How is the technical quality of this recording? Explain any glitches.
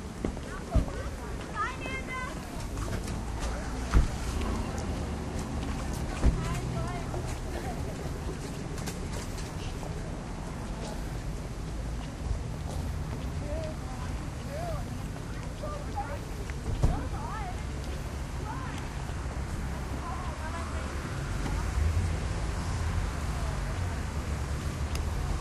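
The technical quality of the recording is good, and there are no glitches to explain.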